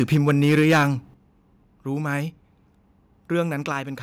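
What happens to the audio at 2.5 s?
Nothing goes wrong at 2.5 s; the speech there plays through intact, with no audible fault.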